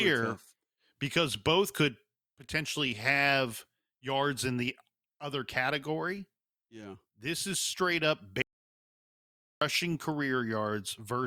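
After "is straight up" at 8.42 s, an audio dropout to silence, likely a lost input, leaves 1.19 s of silence: flat waveform, blank spectrogram.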